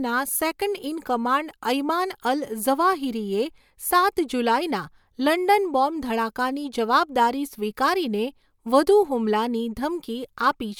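Nothing stood out on listening to this speech recording.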